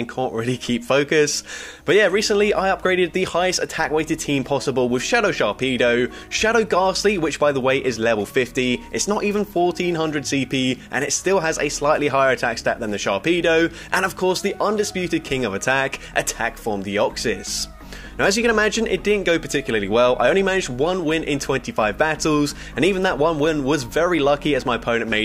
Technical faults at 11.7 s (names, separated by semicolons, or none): none